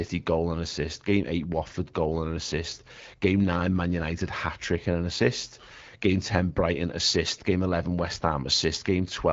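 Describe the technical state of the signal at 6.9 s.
At 6.9 s the speech is intact, with no fault to be heard beyond the band limit of the AMR wideband (HD Voice) coding carrying it.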